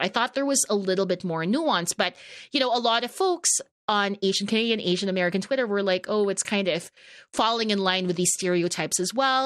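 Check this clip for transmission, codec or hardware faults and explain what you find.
One codec fault is present throughout the speech. From start to end, the speech sounds dull with a gurgling, granular roughness, likely MP2 compression at a rate near 80 kbps. Starved sub-bands drop out, so a spectrogram shows upper bands flickering on and off in blocky patches.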